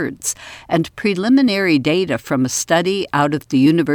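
Nothing goes wrong anywhere in this bit of speech, so there's no technical fault to point to.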